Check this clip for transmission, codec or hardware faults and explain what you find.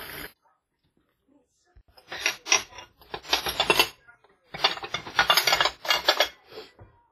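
One codec fault runs through the whole clip, likely WMA compression at a low bitrate, around 24 kbps. The transform coder spreads quantisation noise across long blocks and zeroes weak components, so the sound rings and smears, carries a washy hiss that breathes with it, and has nothing above 15.4 kHz.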